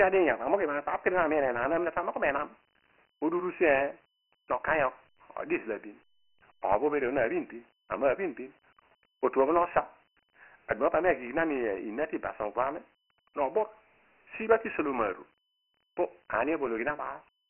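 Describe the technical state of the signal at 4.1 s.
At 4.1 s the speech carries Dialogic VOX ADPCM coding, present for the whole clip. Nothing reaches above 3 kHz, which fits the 6,000-samples-a-second VOX rate at 24 kbps. The 4-bit adaptive steps cannot track the waveform closely, leaving a heavy gritty hiss that rides on the speech.

The moment also falls inside a span from 3.62 to 8.60 s of low bit depth without dither, likely from rounding to about 9-bit resolution. The error follows the signal at roughly 40 dB below it, so quieter passages turn grainy and sputter between adjacent levels.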